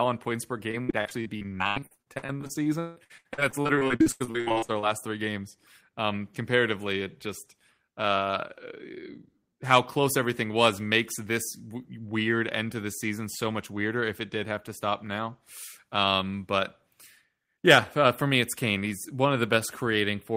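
A speech clip with repeated packet loss (robotic sound) from 0.71 s to 4.85 s, after "on points per" and before "three games". Dozens of short holes hit this stretch. The longest runs to about 163 ms. Each hole is bridged by stretching the last bit of sound, so roughly 40 percent of the span is filler. That gives a choppy, robotic texture with pieces of speech missing. The pattern points to a network stream dropping packets again and again.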